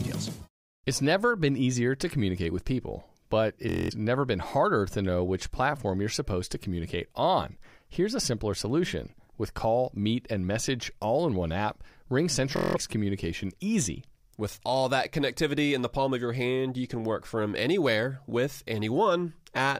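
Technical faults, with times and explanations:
3.69–3.92 s and 12.56–12.77 s, Bluetooth stutter: lost packets make the receiver replay one short buffer, buzzing for 209 ms and 186 ms, then the sound resumes further on.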